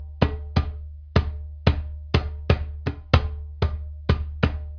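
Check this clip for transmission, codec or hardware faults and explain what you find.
Checking this clip turns up no faults to explain.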